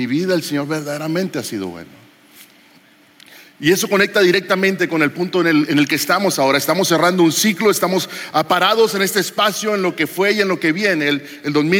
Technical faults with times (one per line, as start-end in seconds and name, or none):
0.00-11.79 gain pumping